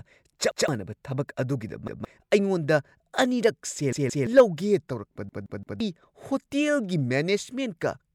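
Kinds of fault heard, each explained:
Repeated buffer: new audio did not reach the output in time, so the device replayed its last block, a 0.17 s span that fits an 8192-sample buffer. The same fragment of speech plays twice at 0.51 s and 1.88 s, three times at 3.93 s, and four times at 5.29 s, with a hard join at each repeat. The result is a stutter, and the speech that should have played, up to about half a second, is lost.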